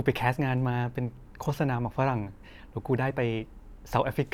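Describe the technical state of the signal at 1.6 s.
At 1.6 s the speech signal is intact, with no audible technical fault at that moment.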